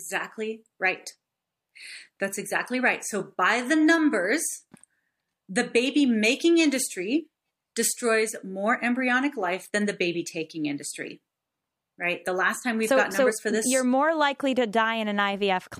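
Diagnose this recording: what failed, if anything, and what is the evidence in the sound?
Nothing in the signal chain has failed: the speech reaches playback continuous and intact, with no audible fault at any stage from capture through to the listener.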